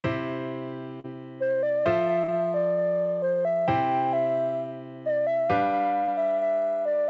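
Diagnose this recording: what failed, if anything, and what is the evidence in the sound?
Short concealed packet loss at 1.00 to 1.07 s, 2.24 to 2.31 s and 6.04 to 6.11 s, a network-stage failure on the call path. Each time about 40 ms of audio arrived too late for the decoder, and the receiver bridged the gap by extending the preceding sound, pitched or noise-like, before fading back into the real stream. The result is a brief smear or wobble at each point, heard over a band that stops at 8 kHz, consistent with G.722 at 64 kbps.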